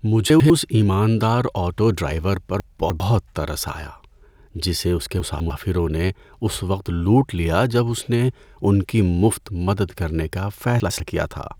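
Speech with chunks out of order at 0.3–0.5 s (before "ایماندار آٹو ڈرائیور پر"), 2.6–3.0 s, 5.2–5.5 s (between "جسے اس کے" and "نے اس وقت لوٹ") and 10.8–11.0 s (after "کرنے کا"): a 100 ms piece plays one to three chunks late, giving a jumbled moment. Unlike a dropout, no audio is missing and no silence appears.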